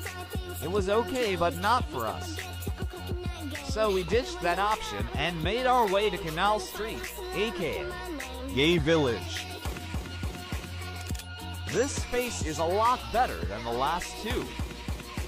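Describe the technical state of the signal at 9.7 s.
At 9.7 s the signal is intact, with no audible fault at that moment.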